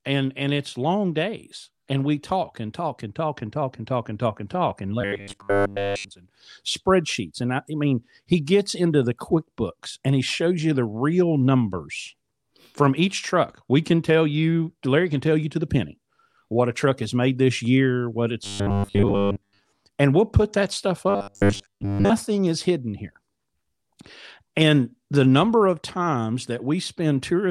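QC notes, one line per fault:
5.02–6.11 s (after "talk and talk and", before "and spreadsheets and I"), 18.44–19.66 s (after "this year what it's", before "and we'll put that") and 21.10–22.11 s (after "we'll put that stuff", before "is hidden here"): robotic sound from repeated short buffers. The speech collapses into a flat metallic buzz at 100 Hz, likely because a 10 ms chunk is replayed while most of the real audio is dropped. A spectrogram shows rigid horizontal harmonics every 100 Hz, and the waveform shows identical 10 ms cycles.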